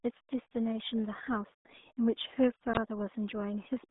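From start to finish the speech carries RealAudio 14.4 codec damage: heavy, gargling smear pointing to an 8 kbit/s dial-up coder, confined to roughly 200 Hz to 3.6 kHz with nothing above 3.7 kHz. Plain telephone band-limiting would muffle without this gargling distortion.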